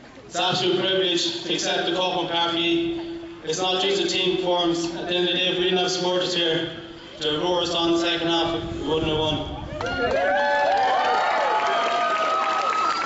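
Nothing stood out as a technical problem anywhere in the audio on listening.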